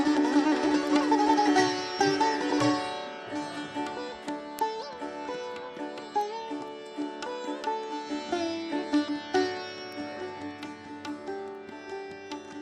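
Word clock ticks run through the audio from 0.18 s to 12.48 s, about fifty sharp clicks of uneven strength recurring roughly every fifth of a second. That pattern points to a digital receiver not locked to the sender's clock, with a mismatch near 100 ppm slipping a single sample at each tick.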